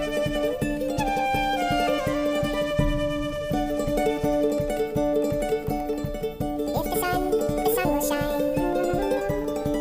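From start to finish the audio's been read two samples at a time, so it plays at double speed and a full octave higher than it should.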